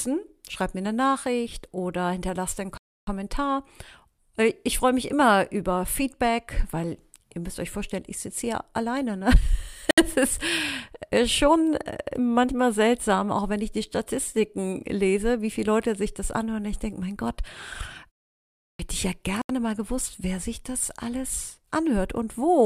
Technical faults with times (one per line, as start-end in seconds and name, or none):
2.77-3.07 Bluetooth stall
9.91-9.98 Bluetooth stall
18.36-18.79 clipped start after a pause
19.42-19.50 Bluetooth stall